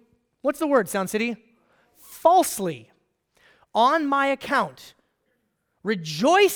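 No technical faults can be heard anywhere in this recording.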